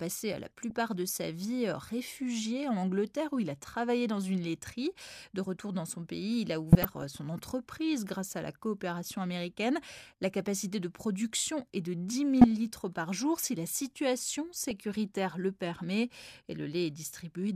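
Weak DAB reception lets bit errors slip past error correction into the MP2 data, so corrupted scale factors make single sub-bands jump. This DAB burbling puts short blips of noise and level jumps into the speech at 0.61–0.71 s before "de sa vie réfugié", 6.72–7.15 s after "son pays il a", 12.41–12.44 s, and 14.55–14.84 s after "la situation".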